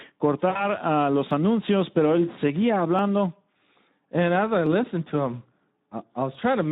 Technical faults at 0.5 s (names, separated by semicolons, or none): Speex codec; VoIP packet loss concealed by the speech codec